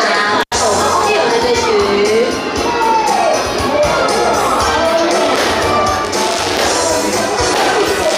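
At 0.41 s the audio drops out through an intermittent contact, lasting until 0.54 s. A loose plug or cable briefly loses connection. The signal is gone for about 86 ms. Crackle marks both edges of the gap, and faint hiss remains while the line is open.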